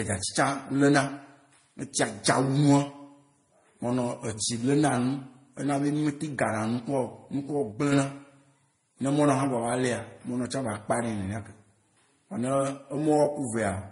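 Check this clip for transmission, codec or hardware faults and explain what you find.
Two faults here: one that runs the whole length and a short level glitch just after the midpoint.

The first is transcoding between lossy codecs. The speech has nothing above 10.5 kHz for the entire clip, and the artefacts sound layered rather than coming from a single codec. That stacking points to a chain of low-bitrate encodes, likely HE-AAC, then MP3, then Vorbis. Each pass wastes bits on the previous encoder's junk, adds its own, and the lowest band limit wins.

The second is a sudden gain jump from 7.72 to 7.92 s. Speech and background noise drop together by about 6 dB, then come back up, with abrupt steps at both ends. That's a digital gain change landing between one sample and the next with no ramp, likely a bit shift or a setting flipped mid-stream, so the level falls and returns as hard steps.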